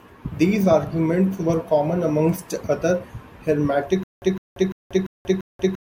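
At 4.03 s the speech breaks into a stutter with silent gaps that runs to the end. A short burst of about 157 ms plays, then about 186 ms of dead digital silence follows. The cycle repeats every 343 ms, five times in all. The rhythm is even and mechanical. The likely cause is a stalled stream or player replaying its last fragment at each retry, then running dry. Whatever should have followed is lost.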